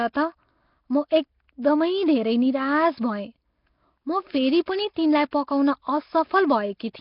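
Throughout, the speech sounds rough, hissy and underwater, likely from heavy Nellymoser compression at about 22 kbps. A spectrogram shows blotchy noise-filled bands and nothing above 5.3 kHz.

Pre-echo at 4.66 s and 5.31 s spreads about 19 ms of hiss ahead of sharp attacks, blurring them. It appears as noise just before each waveform onset.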